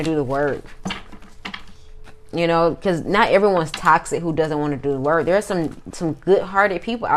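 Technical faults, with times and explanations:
1.08–1.10 s and 5.43–5.55 s: DAB burbling. Weak reception lets bit errors past correction. Corrupted samples in MP2 sub-bands give brief noise blips.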